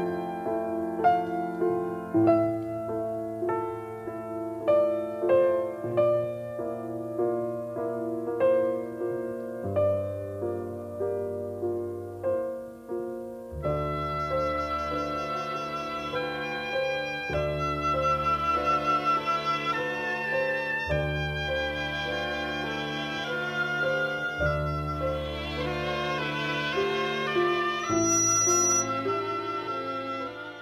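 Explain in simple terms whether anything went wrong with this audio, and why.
Yes, near the end there's loudspeaker feedback squeal: from 27.80 to 28.92 s a mic catches its own speaker, and a 5.9 kHz whistle swells up within about a third of a second.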